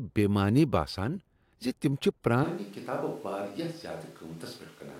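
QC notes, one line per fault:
2.44 s to end, switch to a distant microphone: just after "باسان ز تم چھ" the speech turns abruptly roomy and hollow, losing bass and dropping by about 10 dB, with background room noise rising to sit only around 25 dB below the speech. The close microphone's feed has likely dropped out, leaving a far-off pickup that captures more reflected sound and room noise relative to direct sound. The change is sudden and the sound does not recover before the end.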